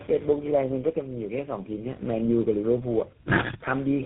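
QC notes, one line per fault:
Throughout: echo with no canceller. Every phrase is trailed by a fainter, thinner copy about a third of a second later, at about 23 dB below the direct speech. The far end's loudspeaker feeds its microphone and nothing subtracts the returning signal, so the sound comes back after the network round trip. On a spectrogram each syllable's harmonic pattern reappears shifted right by that gap, much weaker. The waveform shows low-level ghost envelopes following each burst.
Throughout: tandem speech coding. The speech sounds rough, noisy, muffled and warbly. The signal was decoded and re-encoded at each network border, passing through four speech codecs in a row, which fits a chain ending in GSM full rate. Each coder compounds the last one's errors. On a spectrogram nothing appears above 3.8 kHz, and the harmonics look smeared and unstable. The waveform shows noisy, less regular pitch periods.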